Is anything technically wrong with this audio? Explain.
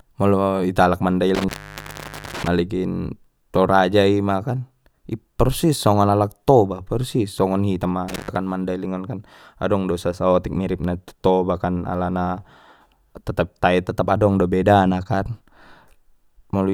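Yes. An intermittent contact cuts the speech twice, from 1.35 to 2.48 s (open about 0.85 s) and from 8.09 to 8.36 s (about 0.12 s): a loose cable or plug briefly breaking, crackling at each edge, faint hiss in the gap.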